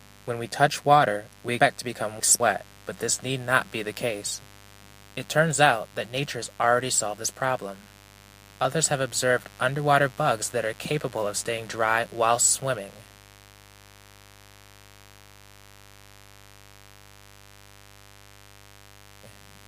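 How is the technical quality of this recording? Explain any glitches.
The recording has two technical problems: a mains buzz that runs through the whole clip and a short stretch where the audio plays out of order.

Mains buzz, throughout: a dimmer, rectifier or unshielded line is letting sharp switching spikes from the 50 Hz supply into the signal path, twice per cycle. Its harmonics climb into the kilohertz range, so a steady, raspy buzz sits about 25 dB below the sound.

Chunks out of order, 1.6 to 2.4 s: a 200 ms block arrived or was written three blocks late, so it plays after the material that should follow it. Nothing is missing, but three hard joins break the flow and the passage sounds jumbled.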